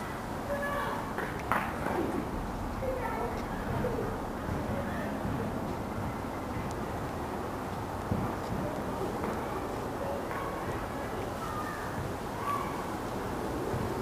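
No technical faults can be heard anywhere in this audio.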